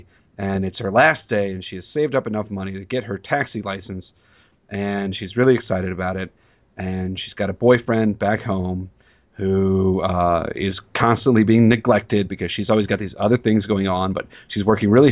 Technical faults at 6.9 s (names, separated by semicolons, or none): none